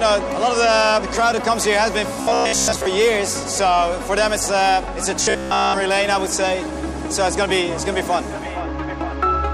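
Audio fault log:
2.21–2.86 s and 5.23–5.74 s: robotic sound from repeated short buffers. The audio turns into a rigid 66.7 Hz metallic buzz, most of the first stretch and all of the second. It's likely a roughly 15 ms buffer being replayed while fresh audio was skipped.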